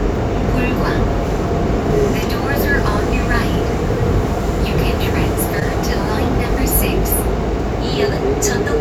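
A short concealed packet loss hits this recording of sounds at 5.60 to 5.63 s. About 20 ms of the stream never reached the decoder in time, and the receiver covered roughly 14 ms of it by extending the preceding sound, either from its pitch or as shaped noise, before blending back into the real signal. The result is a brief smear or wobble at that spot, where a short transient can drop out.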